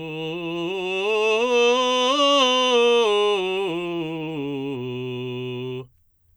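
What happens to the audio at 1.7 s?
Nothing goes wrong at 1.7 s: the music plays through that moment intact, with no dropout, click, distortion or other fault.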